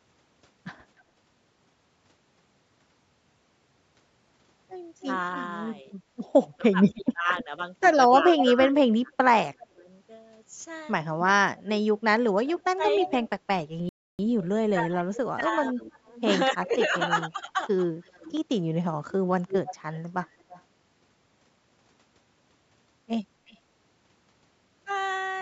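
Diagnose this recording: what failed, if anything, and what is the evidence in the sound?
Echo leak in the call processing. A delayed copy of the speech returns at 0.99 s, 5.0–9.66 s, 11.57–13.13 s, 15.81–20.62 s and 23.47–23.58 s. The delay grows from 280 to 337 ms. The copy is about 10 dB down at its strongest. A loudspeaker echo likely slipped past the canceller.

Speech suppressed in double talk, also call processing. From 6.58 to 9.87 s and 12.45 to 17.61 s, the speech dips while the far side plays on the loudspeaker. The drops reach about 20 and 25 dB. The canceller likely mistook both signals for echo and attenuated them.

Playback stall. The sound stops dead from 13.89 to 14.19 s, a gap of 0.3 s. Then it resumes. The player likely ran out of buffered data or was blocked. The lowest bass is absent, which is normal call microphone filtering.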